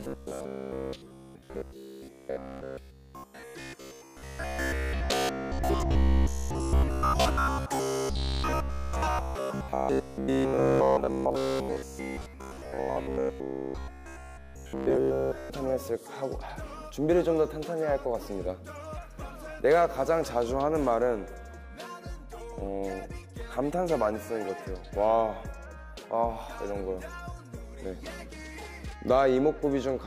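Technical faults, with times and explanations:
0.02–15.5 s, robotic sound from repeated short buffers: a rigid metallic buzz at 66.7 Hz, likely from a 15 ms chunk replayed about 70% of the time. The waveform shows identical repeating cycles, and the spectrogram shows evenly spaced harmonic stripes.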